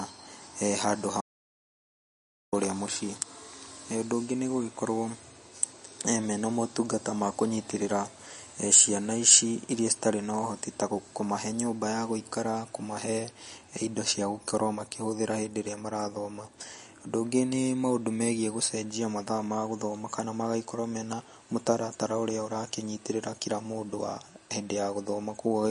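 A speech recording, and it carries two faults. The first is MP3 compression, audible from start to finish. The damage is plain. Nothing is left above 10.6 kHz, so the treble is cut off flat. Weak frequency detail flickers in and out between frames. That gives the speech a watery, swirly edge, with chirpy sibilants and smeared consonant onsets. The thin sound fits a low bitrate, around 40 kbps, as the likely cause. The second fault is an audio dropout to silence. It runs from 1.21 s to 2.53 s, about 1.3 s in all. The speech stops abruptly and resumes mid-flow. The gap is dead digital silence, with no room tone underneath. Whatever was said in that stretch is lost. A brief loss of the input signal, such as a link failure or momentary mute, is the likely cause.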